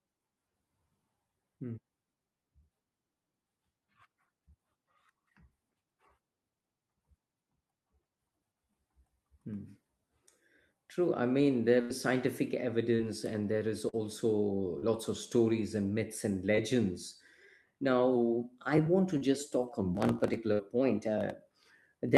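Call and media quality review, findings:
Burst of packet loss, 11.81–11.91 s and 20.53–20.61 s. Receiver jitter buffer and loss concealment. About 80 ms, then about 60 ms, never arrived in time. Decoder extends the last sound and fades it. Audible as a held buzz or fading hiss, then a jump ahead. Spectrogram: frozen, smeared harmonics decaying to dark. Waveform: repeating cycles shrinking in amplitude before an abrupt restart.

Short concealed packet loss, 12.95–13.01, 13.89–13.95, 14.79–14.88, 16.55–16.59 and 19.17–19.23 s. Same receive path. Gaps of about 20–40 ms filled by extrapolated pitch or shaped noise, then crossfaded back. At 14.79 s a few extra ms are also dropped on rejoin. Heard as brief smears or wobbles, and consonants can vanish. Spectrogram: short blurred vertical patches breaking the formant detail. Waveform: overly regular cycles, seams at the edges.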